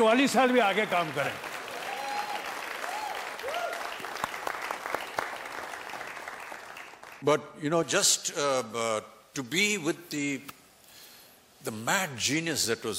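From 7.83 s to the end, the sound turns thin, bright and hissy, with a sharp, edgy top that was not there before. This is pre-emphasis left on: the treble was lifted for recording or transmission, but the matching de-emphasis was never applied on playback. The highs sit about 11 dB above 1 kHz at 10 kHz, which fits an uncorrected J.17 emphasis curve.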